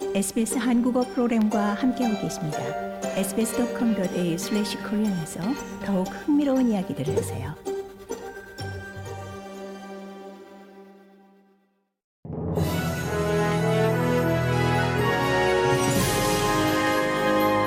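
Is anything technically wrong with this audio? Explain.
Yes, there are two problems.

At 7.15 s there is a skip ahead. Roughly 0.4 s of audio was discarded while later audio was already queued, so playback jumps straight across. Unlike a dropout, there is no silent hole, just an abrupt seam where material is missing.

From 7.55 to 9.68 s comes a jitter buffer speed-up. To drain excess delay, the receiver trimmed many short pitch-period slices, about 150 ms in total, so the audio runs at 107% speed and sounds hurried. Unlike resampling, the pitch stays unchanged.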